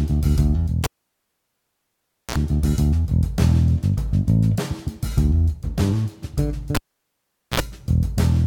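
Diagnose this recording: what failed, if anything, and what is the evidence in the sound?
An analogue-wiring fault: cable pulled and plugged in, live, twice. A pop at 0.84 s opens 1.47 s of near silence, then 45 ms of 60 Hz mains buzz as only the plug tip touches, and a pop at 2.36 s. From 6.75 to 7.60 s the same happens, with 0.80 s silent and 58 ms of buzz.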